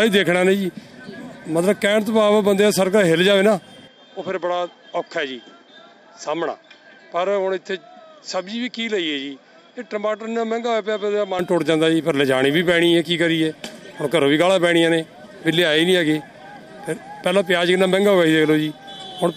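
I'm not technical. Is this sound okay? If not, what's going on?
No. From 3.87 to 11.39 s the sound turns duller and slightly quieter, with faint new background noise, then clears again with no gap. That points to an input switched to a poorer device, likely a different microphone, because tone, loudness and background all change together.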